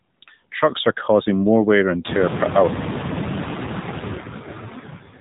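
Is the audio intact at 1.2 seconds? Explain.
No. At 1.2 seconds the speech is running through two faults that last the whole clip.

The first is the AMR narrowband mobile codec. Nothing above 4 kHz gets through, and the voice has that buzzy, synthetic edge you get when a vocal-tract model rebuilds it from a few pulses per subframe. The damage is plainly audible, which fits a low-rate mode around 7.4 kbps rather than the top AMR-NB rate.

The second is noise suppressor artifacts. The suppressor pulls down the bands it judges to be steady noise, frame by frame, but only by about 5 dB, so the background still comes through, dipping and lifting around the speech.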